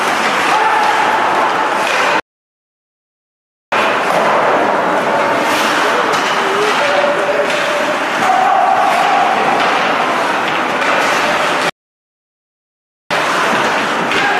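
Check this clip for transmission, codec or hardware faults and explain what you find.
Two playback stalls interrupt the clip, at 2.20 to 3.72 s and at 11.69 to 13.11 s. In each, the sound cuts off abruptly and silence holds for about 1.52 s, then about 1.41 s, before the audio resumes. The likely cause is the player running short of data, or its playback thread being blocked, so output goes silent until the buffer refills or the thread recovers.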